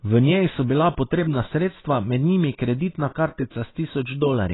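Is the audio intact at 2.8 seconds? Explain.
No. The clip was likely squeezed through low-bitrate AAC compression, so at 2.8 seconds, as throughout, the speech is dull, with nothing above 3.9 kHz and a warbling, smeared texture.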